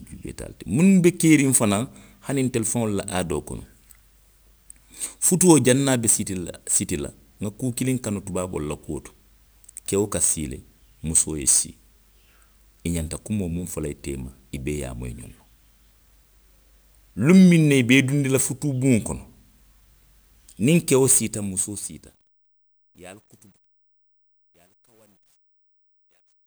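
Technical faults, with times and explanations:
21.01–26.46 s, truncation distortion on a fade: as the speech fades out from around 21 s, the gain stage discards low bits without dither, which fits roughly 11-bit resolution. Quiet waveforms become coarse steps, so from 23.09 s the tail sounds gritty.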